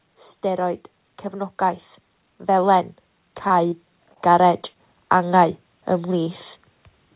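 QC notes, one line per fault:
0.41–5.42 s, automatic gain rising. The level climbs steadily by about 10 dB over roughly five seconds. Speech and background noise grow louder together, so the floor rises with the voice. This is the gain control reacting to an input it judged too quiet and lifting its gain slowly, not the talker getting closer or louder. The smooth, shared swell is the sign of gain applied to the whole signal.
3.48–3.52 s, 3.68–3.74 s, 4.14–4.18 s, 4.62–4.66 s and 4.74–4.77 s, short concealed packet loss. Five brief gaps, each 20 ms of missing audio except the 40 ms one at 3.68 s. Each sounds like a small smear or wobble. The receiver filled each hole by extending the preceding sound, then blended back into the real signal. The call path is band-limited, with nothing above 4 kHz.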